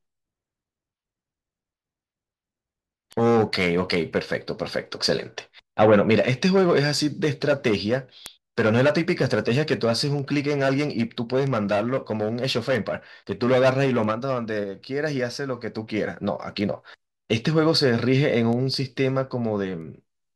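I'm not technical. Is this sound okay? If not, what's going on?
No, not quite. From about 0.56 s to 19.81 s there's a sharp tick roughly every 0.7 seconds, around thirty in all, sitting under the speech. These are word clock ticks: the audio passed between two digital devices that kept time separately, with clocks out by something like 40 parts per million. Each time they drift a step apart, one sample gets dropped or doubled, and that slip is the tick you hear.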